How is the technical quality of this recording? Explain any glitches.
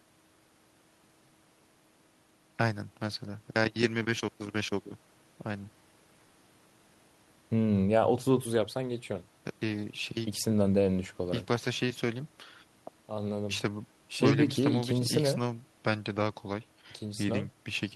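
Nothing in the recording stood out on listening as a technical problem, so there are no glitches to explain.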